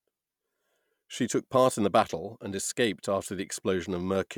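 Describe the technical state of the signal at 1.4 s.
At 1.4 s the speech signal is intact, with no fault present at that moment.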